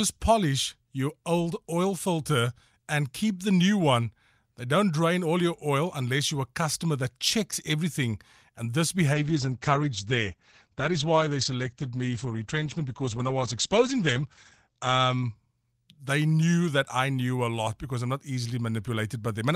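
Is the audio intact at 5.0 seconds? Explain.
Yes, the speech at 5.0 seconds plays through cleanly, with no dropout, click, distortion or other fault at that moment.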